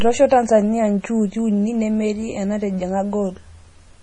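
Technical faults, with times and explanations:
Throughout, MP3 compression: the speech sounds watery and swirly, and nothing is left above about 10.5 kHz. This is likely a low-bitrate MP3 encode, and the heavy damage points to something near 32 kbps. Short of bits, the encoder cut the treble at a fixed frequency and dropped weak frequency lines frame by frame. On a spectrogram the band stops abruptly at 10.5 kHz, with flickering holes and blocky patches below it.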